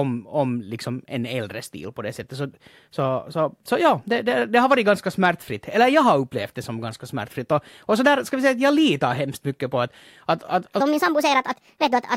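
A section was likely played against the wrong clock, from 10.80 s to 12.17 s at the end of the speech. That section at the wrong speed runs 1.39 times too fast, so the voice jumps up by about five semitones and sounds high and hurried.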